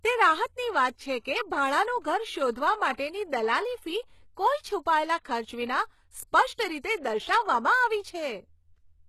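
Throughout the speech, the treble sounds synthetic. Nothing reaches above 12.3 kHz. S sounds come out gritty and lispy. The cause is likely HE-AAC compression. It rebuilds the upper band from copied lower bands, and the damage fits a bitrate around 16 kbps.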